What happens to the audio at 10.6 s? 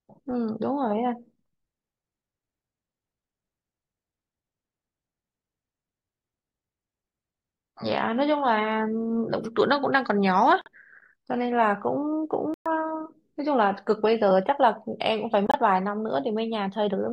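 At 10.61 s the speech cuts abruptly to silence for about 64 ms, until 10.68 s. This is a corrupt frame muted: damaged compressed frames were rejected by the decoder and replaced with silence, which fits two frames of about 32 ms each. Unlike a buffer dropout, the timing is kept, so speech resumes exactly on schedule.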